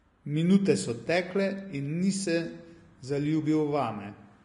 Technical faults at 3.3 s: Vorbis compression

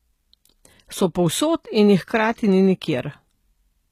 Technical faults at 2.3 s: HE-AAC compression

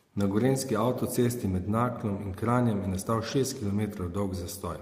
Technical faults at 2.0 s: none

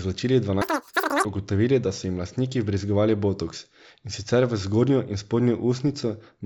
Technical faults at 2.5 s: none

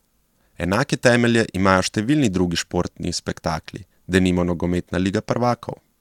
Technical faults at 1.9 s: none

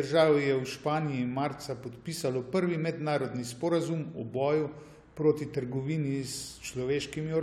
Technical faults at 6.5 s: none

